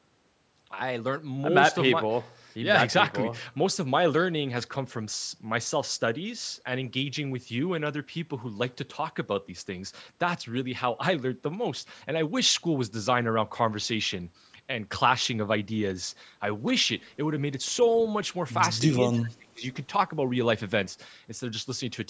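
An echo canceller, likely unable to tell the talker from echo, turned both down: speech suppressed in double talk, dipping about 30 dB from 19.1 to 19.62 s.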